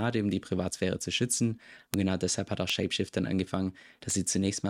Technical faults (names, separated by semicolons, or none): bit error spike